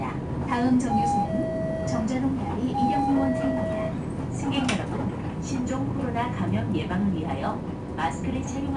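From start to end, the audio carries 4-bit ADPCM compression. Each sample is coded as a coarse step from a prediction, so a gritty hiss rides on every loud sound. Nothing lies above 10.7 kHz, which points to a low sample rate and dulls the top end.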